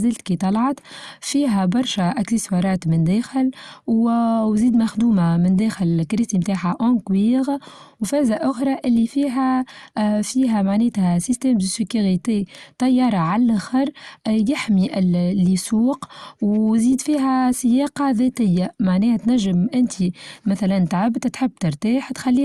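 Nothing in the recording stood out as a technical problem on listening.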